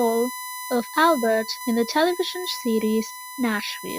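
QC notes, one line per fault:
Throughout, USB whine: a steady, fixed-pitch tone at 1 kHz sits under the speech from start to finish, and it is loud, roughly 10 dB below the speech itself, so it stays clearly audible in pauses and colours the voice. The pitch points to the USB bus's 1 ms frame timing. The current the interface draws at that rate is leaking into the audio path through shared power or ground.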